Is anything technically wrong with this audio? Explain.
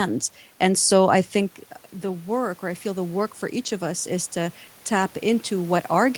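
Yes. Automatic gain rising occurs from 2.0 to 4.63 s, after "so i think uh." The talker moved back near 1.5 s, dropping about 9 dB. The gain control then ramped up about 4 dB, swelling voice and room noise together. The waveform envelope and the spectrogram's noise floor brighten gradually, recovering under half the loss.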